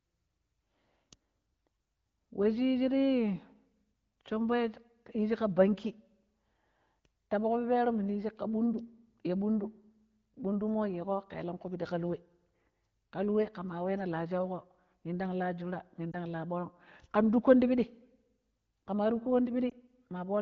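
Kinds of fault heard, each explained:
Lost AMR speech frames: when a wideband AMR frame fails its checksum after radio errors, the decoder conceals the gap by reusing the last good pitch and vocal tract settings at lowered gain. In this speech the two losses each sound like a single concealed frame of about 20 ms, heard as a brief dip or warble at 16.12 to 16.14 s and again at 19.70 to 19.74 s.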